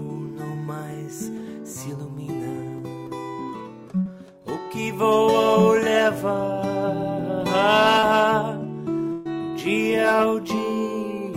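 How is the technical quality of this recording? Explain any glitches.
The recording has three brief dropouts, two short and one longer.

At 4.01 s and again at 7.99 s there is a quick smear or wobble lasting roughly 40 ms and 30 ms. This is short concealed packet loss: the receiver extended the preceding sound to cover audio that arrived too late.

At 9.12 s the sound turns into a held buzz or fading hiss for about 130 ms, then jumps ahead. This burst of packet loss left a longer gap that concealment stretched over, so that stretch is missing.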